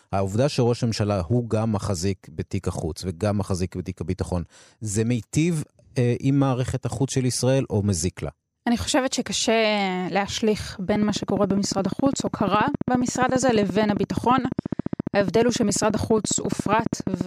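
From 10.96 s to 17.22 s a train of clicks runs over the speech, regular pulses at 14.6 per second, around a hundred in all, peaking about 15 dB above the signal. Each click has much the same shape, so the result is a steady, fast ticking that sits on top of the talker and carries straight through the pauses. The cause is likely electrical interference from nearby equipment or a faulty connection or power supply.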